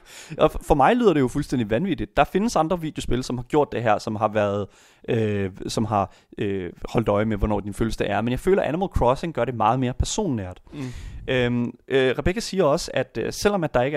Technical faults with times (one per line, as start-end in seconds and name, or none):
none